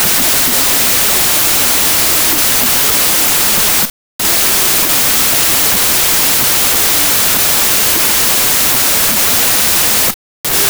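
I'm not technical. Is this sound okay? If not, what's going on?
No. Throughout, there's a wrong sample width. Audio saved as 24-bit is read as 32-bit, so speech plays 1.33 times fast, high-pitched, buried in loud noise.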